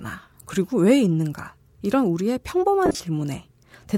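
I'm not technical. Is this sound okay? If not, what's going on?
No. Near the end, from about 2.86 to 3.00 s, the wireless Bluetooth link dropped pieces of the signal. These are lost LE Audio frames: about 110 ms of speech went missing, in gaps spread across 140 ms, the longest only a few hundredths of a second. The receiver patched each gap by reusing the last bit of sound it had, slightly scrambled, so the speech briefly turns into a rough, hissy smear before clearing.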